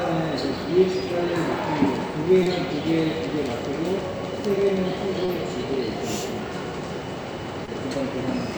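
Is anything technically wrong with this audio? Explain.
Yes. Short concealed packet loss occurs three times, at 2.43–2.48 s, 5.26–5.30 s and 7.66–7.69 s. Each time about 20 ms of audio failed to arrive, and the receiver patched roughly that span by extending the preceding sound before blending back, giving a brief smear or wobble. On a spectrogram each patch shows as a short, smoothed, repeated-looking strip; the waveform shows a continued stretch with a soft join.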